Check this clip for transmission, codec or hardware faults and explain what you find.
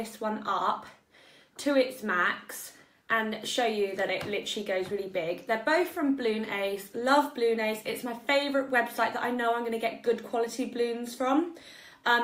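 No transmission, codec or hardware fault is audible anywhere in the clip.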